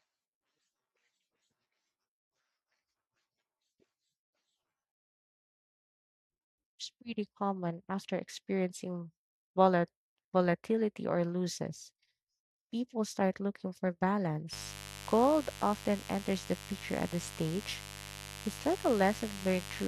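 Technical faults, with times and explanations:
14.53–19.88 s, mains buzz: interference from the 50 Hz mains, with sharp switching spikes twice per cycle, enters the signal path and stacks harmonics into the kilohertz range. Under the speech there is a steady, raspy buzz, around 15 dB below the speech level.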